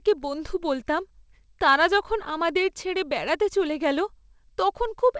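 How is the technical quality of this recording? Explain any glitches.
No glitches can be heard in this speech recording. It has come through a call connection whose codec stops at 8 kHz, which fits a wideband codec like G.722, so the upper treble is missing and there is the coding texture typical of a call.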